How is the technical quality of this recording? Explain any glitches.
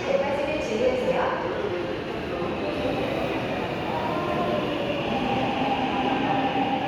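The recording has no audible technical glitches. Nothing in it breaks up, skips or distorts at any point.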